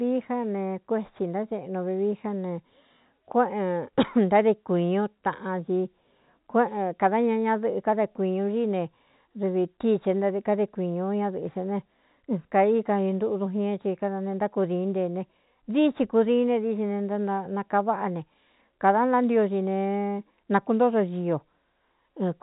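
No faults; the speech stays within telephone bandwidth.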